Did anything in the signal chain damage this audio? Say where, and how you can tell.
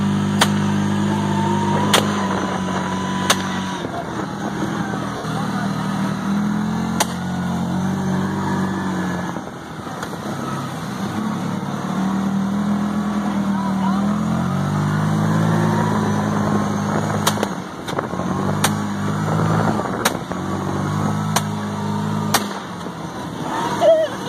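Yes. Lost LE Audio frames on the Bluetooth link: at 5.17 s for 70 ms and at 20.00 s for 30 ms, the decoder smears the last spectrum into noise.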